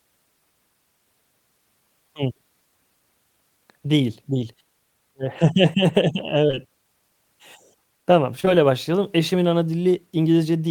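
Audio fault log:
6.47 to 6.58 s, short concealed packet loss: three back-to-back 20 ms gaps where audio arrived too late, so the receiver patched each by extending the preceding sound, pitched if voiced, shaped noise if not, then crossfaded back, giving a brief smear or wobble.
8.40 to 8.48 s, short concealed packet loss: two more consecutive 20 ms losses patched the same way, another short smear where a quick consonant could drop out.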